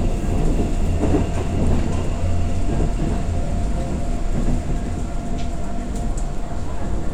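No technical faults can be heard anywhere in this audio. Nothing in it calls for a timestamp or further comment.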